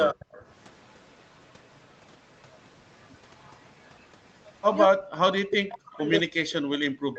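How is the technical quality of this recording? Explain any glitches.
The recording has two call faults, speech suppressed in double talk and echo leak, over a narrowed band with nothing above 8 kHz, consistent with an Opus call path.

Speech suppressed in double talk, 0.13–0.28 s and 4.87 s to the end: the speech drops by up to about 40 dB, likely because an echo canceller muted the talker during overlapping speech.

Echo leak, 0.2–0.44 s, 0.76–2.07 s, 2.5–2.57 s, 2.99–4.1 s and 4.34–4.54 s: a faint copy of the speech trails 209 ms behind, about 25–40 dB down, likely residual loudspeaker echo the canceller missed.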